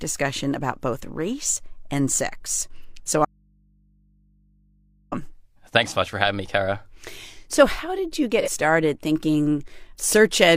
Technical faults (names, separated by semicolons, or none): audio dropout to a faint residue; AAC frame loss with concealment